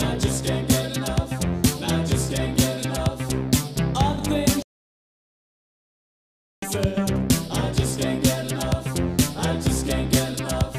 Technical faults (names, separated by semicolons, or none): playback stall